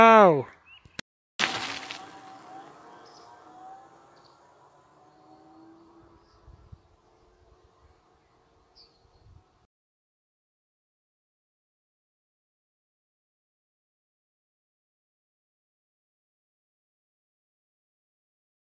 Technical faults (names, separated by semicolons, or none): none